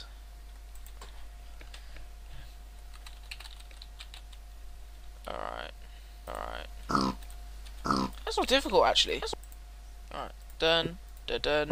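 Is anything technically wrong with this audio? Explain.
Yes, there's a doubled audio track from about 6.28 s to 9.34 s. A second copy of the same sound runs roughly a second behind the original and at about the same level, so everything is heard twice. The copy is full-band and dry, with no decay or room colour, and it cuts in and out abruptly. Most likely a slower second capture path or a misaligned edit left two copies out of step.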